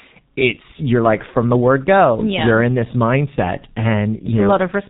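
Throughout, the speech passes through the low-rate G.723.1 codec, which fits about 6 kbit/s: nothing above 3.8 kHz survives, leaving it muffled and hoarse, with heavily blurred consonants.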